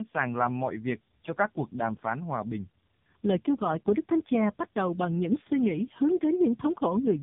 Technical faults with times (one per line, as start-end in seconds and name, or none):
0.00-7.22 tandem speech coding